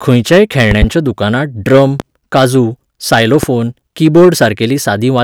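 Loud pops strike at 0.71–0.86 s as a quick double, then singly at 2.00–2.03 s and 3.43–3.47 s, each peaking about 15 dB above the speech, which continues underneath. The sharp thumps likely come from electrical transients such as switching or static.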